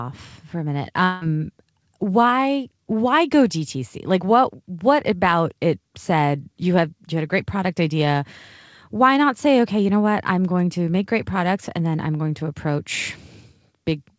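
At 1.04 s the speech breaks off and is replaced by a synthetic continuation that runs to 1.23 s, about 0.17 s of buzzy, fading tone with no true silence. This is a long network dropout, likely caused by packets failing to arrive, so the receiver stretched the last sound to cover the gap. Nearly 0.2 s of speech is lost. On a spectrogram, smeared, repeating harmonics decay there before normal speech resumes, all under the call path's 8 kHz ceiling.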